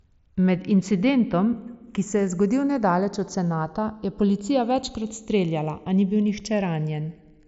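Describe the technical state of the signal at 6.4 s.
Concealed Bluetooth headset packet loss occurs at 6.39 s. A single gap of about 7.5 ms, consistent with one lost frame, was filled by repeating the closest-matching recent waveform. Because it is this short, it is nearly hidden within the mSBC wideband sound.

Channels drifting apart also affects this moment. The two sides run on clocks roughly 50 ppm apart, so the inter-channel delay creeps toward about 0.4 ms. Summed to mono, the resulting comb notches glide slowly, producing a slow flanging sweep.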